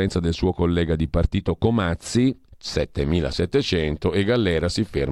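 Sample clock jitter runs through the whole speech recording. The converter's clock wanders, so each sample lands a little early or late. The timing error is around a microsecond. Where the waveform changes fastest, that small timing slip becomes a larger amplitude error. The result is a faint hiss or roughness, roughly 45 dB below the speech. It grows on loud and bright sounds and disappears in the pauses between them.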